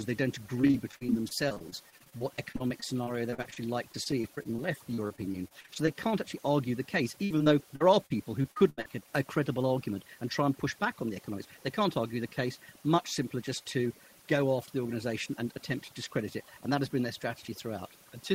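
A speech recording, heard throughout with a background that drops and breaks up into twinkling specks. That is overdone noise removal: a noise reducer set too hard pulls individual frequency bands down or out whenever they sit close to its idea of the noise, so the quieter parts of the voice disappear along with the hiss. From 0.61 to 5.95 s, and again from 7.24 to 8.90 s, the speech turns choppy and robotic, with small pieces missing. This is repeated packet loss (robotic sound). Over the first stretch dozens of short holes, none longer than 39 ms, were each patched by stretching out the sound just before them, so that roughly a sixth of that span is filler. The second stretch is sparser, with holes up to 78 ms and about a fifth of it concealed.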